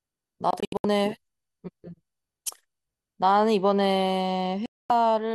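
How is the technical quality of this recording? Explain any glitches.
The recording is marred by two digital broadcast dropouts, at 0.51–0.85 s and 4.66–4.90 s. The receiver muted whenever frames arrived corrupted or missing. The first breaks the speech into several short holes, the longest 72 ms. The second is a solid 240 ms gap, and that audio is simply gone.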